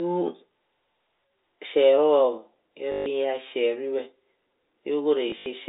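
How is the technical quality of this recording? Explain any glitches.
Two brief robotic stutters break up the speech, carried over a telephone-band G.711 line whose 300 Hz to 3.7 kHz range can be heard.

From 2.92 to 3.06 s the sound jams into a buzzy repeat, and again in patches between 5.30 and 5.46 s, the longest stretch about 80 ms. This is packet loss with the last packet repeated: about 140 ms and then 100 ms of audio went missing, and the receiver replayed the previous chunk, which fits 20 ms packets. The loops buzz at around 50 Hz.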